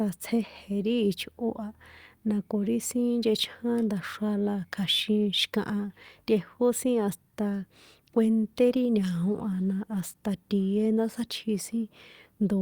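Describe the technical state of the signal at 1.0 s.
At 1.0 s the signal is intact, with no audible fault at that moment.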